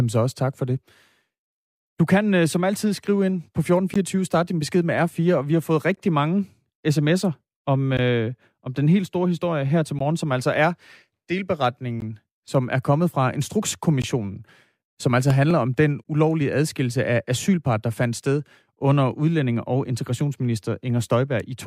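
A gap at a join of encoded pieces cuts a 16 ms silence into the speech at 3.94 s (after "altid skrive ind på"), 5.96 s (after "og vi har fået"), 7.97 s (after "mange sms'er om"), 9.99, 12.00, 14.02 and 16.04 s. Each piece was encoded on its own and joined untrimmed, so encoder delay and last-frame padding remain. Unlike random dropouts, these gaps come exactly every 2 s, and speech resumes where it stopped.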